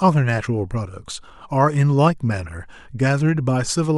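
No technical faults are audible in this speech.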